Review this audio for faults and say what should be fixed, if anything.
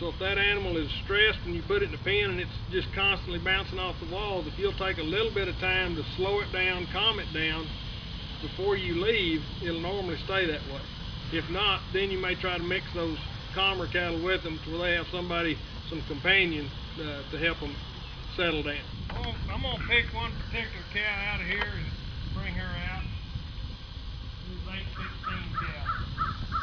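No faults; nothing to fix.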